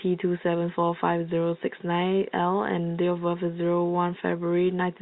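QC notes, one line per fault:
The speech signal comes through a G.711 telephone path working as intended, its band stopping at about 4 kHz, with no faults heard.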